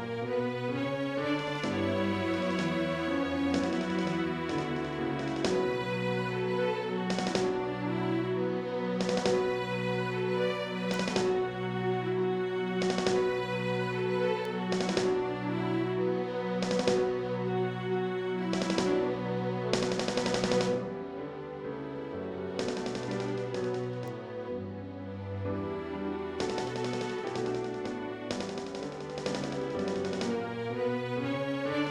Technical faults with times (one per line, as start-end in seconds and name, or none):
10.94 bit error spike
14.45 bit error spike
24.08 bit error spike